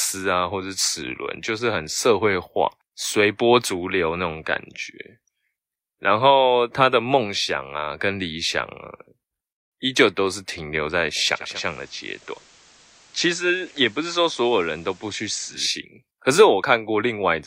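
Speech with digital radio blending to analogue from 11.34 to 15.77 s. The digital signal dropped out and the receiver cross-faded over 290 ms to FM and later back. Hiss rises to roughly 30 dB below the speech and level falls about 3 dB.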